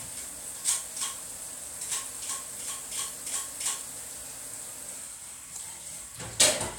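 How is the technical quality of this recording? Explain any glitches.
The recording is technically sound, with no glitches, dropouts or other faults anywhere in the signal.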